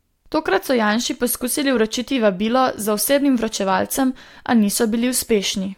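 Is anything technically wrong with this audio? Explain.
No, nothing technically wrong can be heard here.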